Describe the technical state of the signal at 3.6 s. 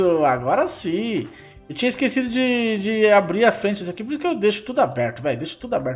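At 3.6 s the signal is intact, with no audible fault at that point.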